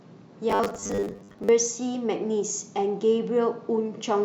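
Robotic sound from repeated short buffers runs from 0.50 to 1.49 s. Across that stretch the speech turns into a hard, metallic buzz pitched at 100 Hz, still loosely following the rise and fall of the syllables. The likely cause is audio arriving too slowly, with the playback filling the gaps by looping the most recent 10 ms segment. About half of the sound is replaced this way, and each repeat stamps that fixed 100 Hz tone onto the speech.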